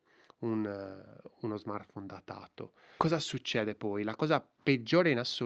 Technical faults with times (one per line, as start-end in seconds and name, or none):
2.99-3.01 skip ahead
3.11-5.45 jitter buffer speed-up